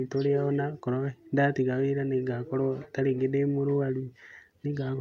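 A short speech clip with clock drift between sender and receiver throughout. The sender's audio clock runs fast, by about 5 percent. Audio arrives slightly quicker than the receiver plays it out. The jitter buffer keeps filling. To stop it overflowing, the receiver must discard small pieces of audio. The surplus never stops building, so this pressure lasts the whole clip rather than appearing as one event.

The result is heard as repeated timing corrections from 0.05 s to 4.95 s. Across that span the receiver keeps cutting short pieces, all in the same direction. The cuts are unevenly spaced. The net effect is playback running at about 105 percent of the original pace. Each cut is small.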